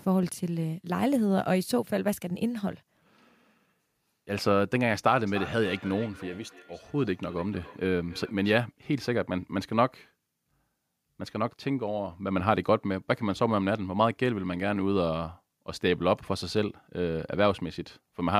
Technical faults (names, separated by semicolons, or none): feedback echo between two devices